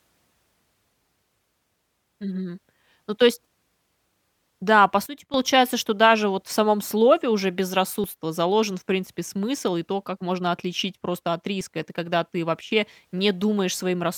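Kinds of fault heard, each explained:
Sudden gain jump: Speech and background noise drop together by about 13 dB at 5.06 s and about 12 dB at 12.61 s. This likely comes from unramped gain steps.
Dropped buffer (overrun): At 8.04 s and 11.61 s the sound skips ahead. Roughly 20 ms and 10 ms are lost, likely through overwritten buffers.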